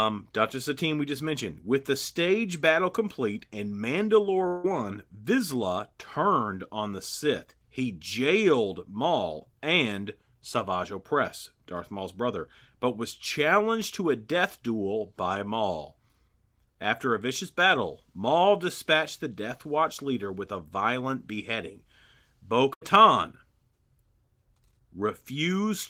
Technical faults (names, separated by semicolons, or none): long network dropout; burst of packet loss